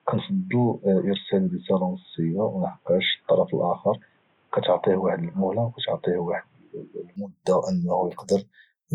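From 0.0 to 7.16 s the speech sounds dull and boxy, with nothing above 3.8 kHz, slightly quieter, over faint background noise. It then opens out with no gap, likely an input switched to a poorer device. A spectrogram shows a flat ceiling ending at 7.16 s, where the waveform grows.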